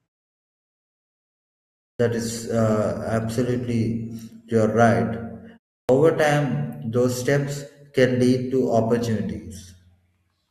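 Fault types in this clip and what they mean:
Clipped start after a pause: After silence, the output device has dozed off and needs a moment to wake, so the beginning of the next sound is lost. At 1.91 s, after 1.91 s of silence, about 85 ms is swallowed. At 5.81 s, after only a 0.31 s pause, about 80 ms goes. Speech starts abruptly, missing its first sounds. Unlike a dropout, nothing vanishes mid-phrase; the loss sits only at an onset following silence.
Adaptive stream at a lower bitrate: From 2.11 s to 4.11 s the stream switches to a lower-quality version because the connection slowed, and then switches back. During those two seconds coding artefacts become more audible. The sound points to a drop from roughly 64 to 32 kbit/s Opus. Unlike a dropout or a packet-loss glitch, there is no gap, only a sudden step down in quality and a sudden step back up.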